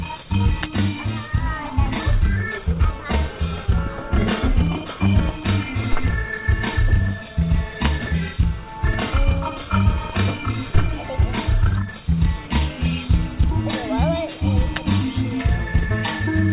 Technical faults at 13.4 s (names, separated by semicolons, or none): none